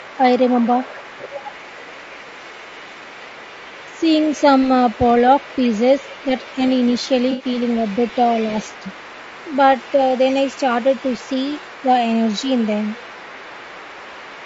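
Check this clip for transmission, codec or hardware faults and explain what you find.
Four kinds of fault are present: low-delay compression throughout, echo of the far end leaking in, a burst of frame loss, and a brief double-talk dip.

Low-delay AAC compression runs through the whole clip, likely AAC-ELD at a rate around 32 kbps. Its short frames resolve pitch harmonics poorly, so the speech sounds plainly rough and grainy, with noise filling the gaps between harmonics. The band stops at 8 kHz.

The other side's voice is leaking through from 0.0 to 11.85 s and again from 12.23 to 14.45 s. The echo canceller likely left some loudspeaker pickup in the microphone signal, so a faint second voice sits roughly 25 dB beneath the main speech.

AAC frame loss with concealment hits from 7.31 to 7.45 s. About 80 ms went missing, which fits four lost frames, and the decoder filled the gap by extrapolating the last good spectrum. 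It comes out as a short smeared, noisy or phasey patch.

Speech is suppressed in double talk at 8.81 to 8.86 s. When both sides overlapped, the echo canceller likely mistook the talker for echo and pulled the level down. The result is a brief dip of a few dB lasting about 50 ms.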